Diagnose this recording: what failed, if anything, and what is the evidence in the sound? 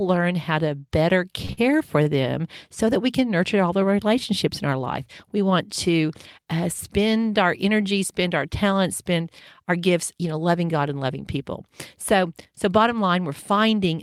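Network jitter buffer: short stalls from late packets just after "how to better", at 1.45–1.51 and 1.53–1.59 s, and again at 2.03–2.08 s. Each one stretches the last sound by 33, 45 and 26 ms, so the spectrogram shows frozen, smeared bands there.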